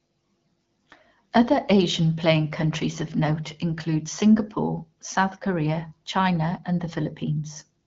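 No technical faults are audible.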